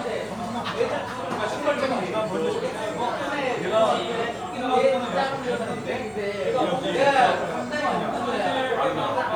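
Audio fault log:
No faults are audible anywhere in this recording of sounds. Nothing in it stands out to the ear as a technical problem.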